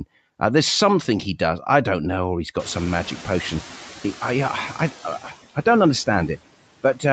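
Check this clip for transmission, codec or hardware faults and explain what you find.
Two noise-suppression faults are present in this speech clip, both tied to the room noise behind the talker.

Noise suppressor artifacts run throughout. The suppressor cuts bands it judges to be steady noise by about 14 dB frame by frame, so the noise sinks between the words and rises under them.

Noise suppressor catching up occurs from 2.59 to 3.91 s, right after "don't know or he's". The room noise jumps by about 23 dB around two and a half seconds in, and the lagging estimate lets it through with only about 6 dB of reduction. It then sinks over 1.32 s. A gradual fade rather than a step marks it as adaptation, not a gain change.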